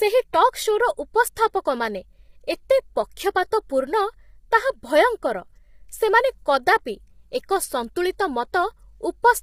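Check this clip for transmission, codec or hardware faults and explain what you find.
One fault runs through the whole clip: low-delay AAC compression, heavily applied. The speech sounds rough and grainy from start to finish. Noise fills the gaps between the harmonics. The top band sounds thin and partly synthetic. The likely cause is AAC-ELD, the low-delay codec used in video calls. Its short frames, around 10 ms, cannot separate pitch harmonics cleanly. They also need more bits. The heavy damage here fits a low bitrate near 24 kbps.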